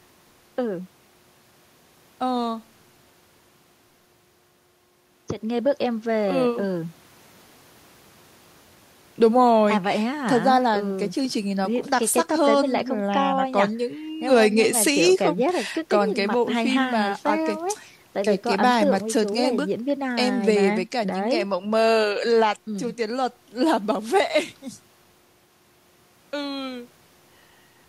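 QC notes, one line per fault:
No faults heard.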